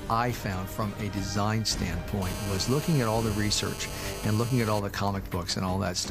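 GSM phone buzz runs from 2.22 s to 4.80 s. A 2G handset close to the recording chain was on a call, transmitting radio bursts at 216.7 per second, and part of the audio circuitry rectified those pulses into the signal path. The result is a hard, rasping buzz at that rate, rich in harmonics and unrelated to the sound itself, holding steady throughout at about 12 dB below the programme level.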